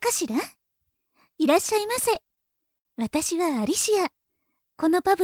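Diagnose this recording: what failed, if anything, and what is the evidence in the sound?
Repeated stalls (stutter) from the network and jitter buffer stage run from 1.95 to 2.86 s: eight brief hold-ups, the longest about 69 ms, 144 ms concealed in all. Late packets drained the buffer, which stretched the last sound each time. Unlike packet loss, nothing goes missing; the audio only drags.

A jitter buffer slow-down follows from 4.26 to 4.52 s. Repeated pitch periods add 42 ms, so playback runs at 87% speed while pitch stays put, rebuilding the buffer's reserve. That unchanged pitch separates it from a clock or playback-speed fault.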